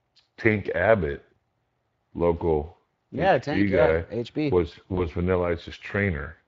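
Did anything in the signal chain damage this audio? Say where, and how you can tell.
Yes. At the codec stage, the Speex codec leaves all the speech hoarse and noisy. It sounds like a CELP rate near 20 kbps, too low for clean excitation.

At the network stage, VoIP packet loss concealed by the speech codec appears from 4.95 to 5.05 s. The decoder stretches its last pitch and filter into a fading buzzy tone or coloured noise, which fits one lost 20 ms frame.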